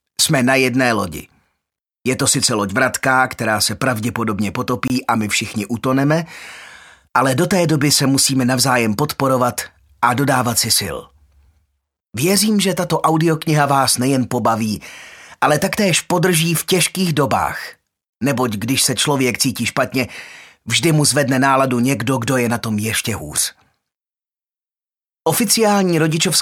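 A block of digital silence cuts the audio from 4.88 to 4.90 s. This 23 ms hole fits a 1024-sample output buffer left unfilled.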